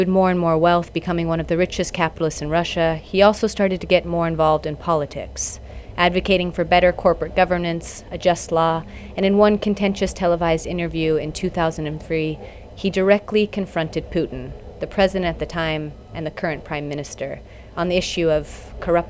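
Nothing here needs fixing, as the audio carries on from beginning to end without a single technical fault to point at.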